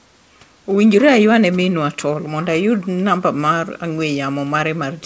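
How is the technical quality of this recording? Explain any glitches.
The speech carries no glitches or technical faults; it has the band limit of a wideband call codec, with nothing above 8 kHz, which fits G.722 at 64 kbps, and a faint room noise about 39 dB below the speech.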